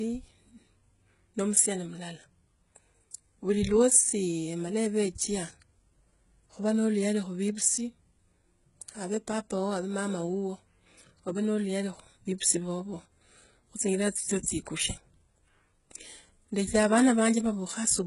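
Speech runs the full length with a treble that sounds bright yet false: sibilants come out gritty and lispy, with a metallic sheen on the s sounds, and nothing at all is present above 11.1 kHz. The likely cause is heavy HE-AAC compression, which fits a very low bitrate of around 12 kbps. The codec keeps only the lower spectrum and fakes the top by copying lower bands upward under a coarse envelope, so the rebuilt harmonics fail to line up with the real ones.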